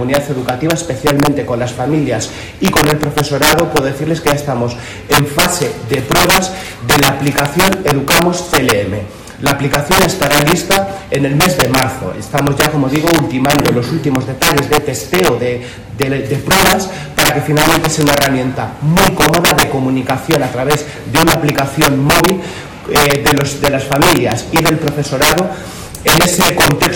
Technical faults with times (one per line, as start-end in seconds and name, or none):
0.00-26.95 integer overflow